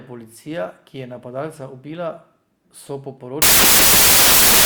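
A speech recording that from 3.42 s to the end at 4.66 s suffers a wrong sample width fault: loud broadband noise swamps the voice, which survives faintly, about 1.5 times too fast and high, fitting 16-bit data read as packed 24-bit. A spectrogram shows a dense noise wash; the waveform jumps to a much louder, noise-like level.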